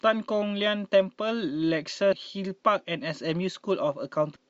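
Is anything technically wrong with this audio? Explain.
Yes, there is damaged data in the compressed stream at 2.12 s and from 4.34 to 4.37 s. Corrupted bytes made the decoder lose frame sync, causing brief glitches in the speech.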